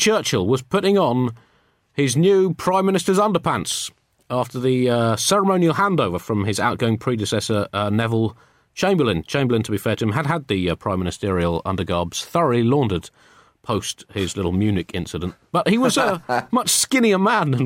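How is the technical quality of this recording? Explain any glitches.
Nothing stood out on listening to this speech recording, so there are no glitches to explain.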